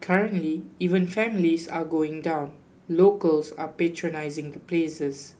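Nothing in the speech recording stood out as a technical problem on listening.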